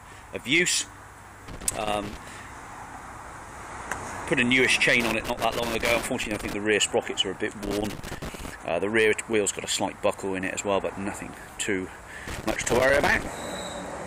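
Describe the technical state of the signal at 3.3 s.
At 3.3 s the signal plays through cleanly, with no dropout, distortion, glitch or other audible fault at that moment.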